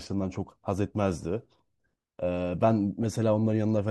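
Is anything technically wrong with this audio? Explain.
Yes. At 3.03 s there is a brief burst of DAB burbling. Weak reception let bit errors, on the order of one bit in a thousand, slip past the error correction into the MP2 audio data. Corrupted samples then put short blips of noise into individual sub-bands for the affected frames. This is heard as a few short, watery blips over the speech.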